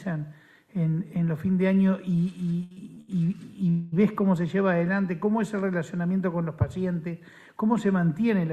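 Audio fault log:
2.63–3.10 s, repeated stalls (stutter): the sound halts four times in under half a second, each break filled by a held-over continuation of what came just before. The longest hold lasts about 73 ms. Together the fills take up 202 ms, close to half the span. Packets were reaching the receiver late, so its jitter buffer kept emptying. Nothing is lost. The audio simply drags and jerks forward in small steps.
3.70–3.94 s, call audio freeze: the sound stops moving and hangs for 225 ms. The gap never drops to silence. The last moment is stretched into a fading buzz until playback resumes exactly where it paused. The likely cause is packets held up in transit, draining the jitter buffer. When they arrive, nothing has been skipped. Instead, everything after this point plays 225 ms later than before.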